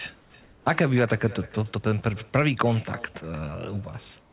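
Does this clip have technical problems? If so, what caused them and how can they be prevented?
Yes. An echo with no canceller runs through the whole clip. Each phrase returns about 300 ms later as a thin copy, about 21 dB below the speech. The far end's loudspeaker fed its microphone, and nothing removed the signal. Turning on acoustic echo cancellation at that end, or using a headset there, prevents it.

Comfort noise replaces the background at 0.20 to 0.34 s, 0.42 to 0.66 s, and from 4.20 s to the end. There the room noise turns smooth and featureless. It drops about 6 dB in the first gap and about 2 dB in the others. The likely cause is discontinuous transmission: the sender goes silent and the receiver makes up noise. Disabling discontinuous transmission keeps the real background.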